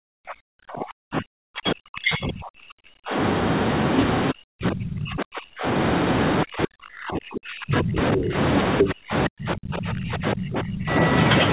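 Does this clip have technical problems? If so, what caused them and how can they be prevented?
Yes. From 0.0 to 3.16 s, 4.31 to 5.65 s, 6.44 to 8.36 s and 8.82 to 10.9 s the speech sinks, sometimes by about 40 dB, likely speech suppressed in double talk: the echo canceller couldn't untangle talker from loudspeaker echo, so it ducked both. Headphones or a better-tuned echo canceller would prevent it.

Around 8.8 s a brief scrap of the other side's voice leaking through comes in at roughly speech level, likely residual loudspeaker echo the canceller missed. Headphones stop this too.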